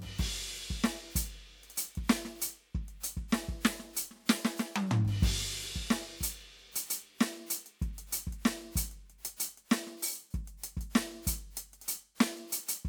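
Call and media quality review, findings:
No defects found in the music on review; no action required.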